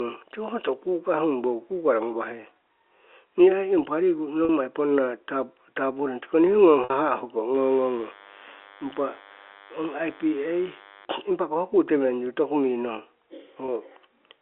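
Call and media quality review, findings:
Packet loss with pitch repetition at 4.45 s (just after "ai impa riku", 40 ms), 6.84 s (60 ms) and 13.66 s (20 ms). Jitter buffer or receiver concealment repeats the last pitch period, heard as brief buzzy held tones, the 60 ms gap fading into silence. Gap lengths fit 10 ms packets.

DECT cordless phone buzz from 7.54 to 11.05 s: steady thin 100 Hz buzz rich in harmonics, roughly 25 dB under the speech. A nearby DECT handset or base transmits every 10 ms, and the analogue audio stage rectifies the bursts. Its 100 Hz fundamental lies below the 300 to 3500 Hz G.711 line band.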